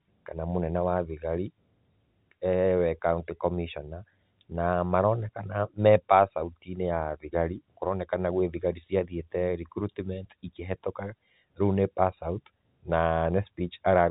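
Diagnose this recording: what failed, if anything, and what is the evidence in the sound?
Nothing failed: the speech carries the narrowband character of G.711 telephone coding, with content stopping at 4 kHz, and no stage in the chain shows a defect.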